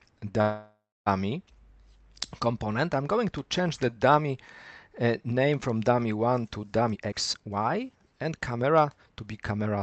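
A call audio freeze interrupts the audio from 0.41 to 1.08 s. The last sound is drawn out as a fading buzz that ends in about 260 ms of silence before the audio resumes exactly where it left off. This is most likely packets stalled in transit while the jitter buffer ran dry. Unlike a packet-loss dropout, nothing is skipped. About 650 ms of filler is inserted, and the playback delay grows by the same amount. From 6.82 to 9.67 s a jitter buffer speed-up follows. The receiver trims the excess delay by repeatedly cutting pitch-period-sized slices, removing roughly 0.7 s, so the audio runs at about 122% speed and sounds hurried. What separates this from a resampling or tape-speed error is that the pitch stays put while only the timing compresses. Throughout, the audio is band-limited to 8 kHz with the usual coding noise, consistent with Opus at around 32 kbps.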